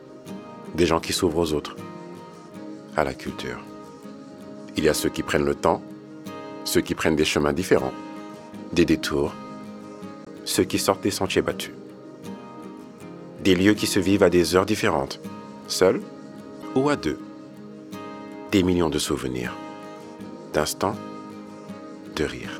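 Two short glitches from damaged data in the compressed stream, at 10.24 to 10.28 s and 16.60 to 16.64 s, each roughly 40 ms long, where bad bytes made the decoder misread frames and lose sync until it found the next good header.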